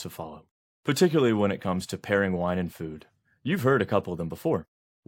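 No technical faults can be heard anywhere in this recording. The speech comes through without any dropout, click or distortion.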